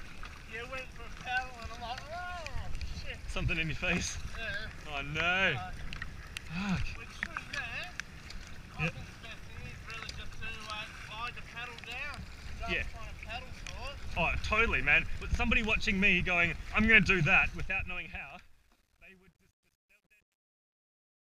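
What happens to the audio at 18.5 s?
By 18.5 s you're in the worst of the truncation distortion on the fade-out, which runs from 17.36 s and gets really bad from 18.23 s to the end at 21.4 s. The fade drops toward the smallest level step without dither, and the grainy stepping fits roughly 11-bit resolution. So the tail goes gritty.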